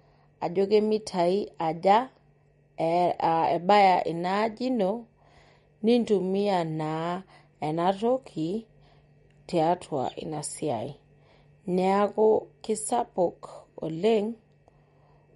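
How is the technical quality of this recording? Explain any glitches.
The recording has plainly audible codec damage throughout. From start to finish, heavy MP3 compression is the likely cause. The encoder ran short of bits, which fits a rate of about 48 kbps. It cut everything above 11.2 kHz and kept dropping weak frequency lines frame by frame, so the speech sounds dull, watery and swirly, with chirpy sibilants and smeared consonant onsets.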